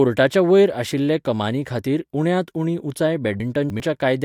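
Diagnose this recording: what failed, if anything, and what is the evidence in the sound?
A buffering fault: chunks out of order from 3.4 to 3.8 s, just after "खातीर उण्यांत उणी उंचाय". A 100 ms chunk plays three chunks late, so the speech jumbles briefly. The waveform and spectrogram show three hard vertical seams where the segments were misordered.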